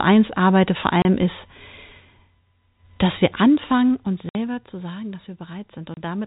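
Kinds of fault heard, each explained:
Packet loss filled with silence: Dropped audio becomes hard-edged silent gaps of 30, 60 and 30 ms, at 1.02, 4.29 and 5.94 s. This fits 30 ms packets.
Zipper noise: The level falls by about 15 dB in coarse unsmoothed steps from 3.16 to 4.76 s, just before "sagen dass", and ticks roughly fifteen times a second.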